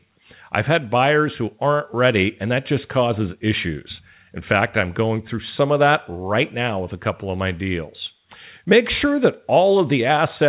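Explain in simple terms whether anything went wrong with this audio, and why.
Nothing went wrong with this speech recording. It passed through a normal phone-style call connection using the G.711 A-law codec, which keeps nothing above about 4 kHz, so the sound is narrower and more telephone-like than a direct recording.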